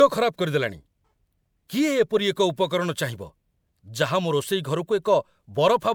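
From start to finish the speech has a swirly, hollow quality with smeared consonant attacks, and nothing is present above about 20.9 kHz. That points to generation loss, likely from MP3 encoding repeated a few times at a rate that fits 128 kbit/s, each pass quantising on a shifted frame grid. Unlike a single low-bitrate encode, the band limit is this high, yet the artefacts are heavier than such a rate alone would produce.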